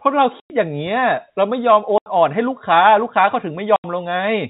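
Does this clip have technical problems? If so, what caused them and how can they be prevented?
Yes. The speech has packet loss filled with silence. There are gaps at 0.4–0.5 s (100 ms), 1.98–2.06 s and 3.76–3.84 s (80 ms each), where the receiver played silence for missing packets. Their lengths fit 20 ms packets, and the edges are abrupt. Prioritising the voice traffic and enabling packet loss concealment at the receiver would prevent these holes.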